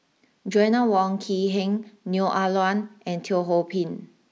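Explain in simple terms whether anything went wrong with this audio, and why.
Nothing went wrong with the speech recording; its signal stays steady and unbroken throughout, with no technical problems to point to.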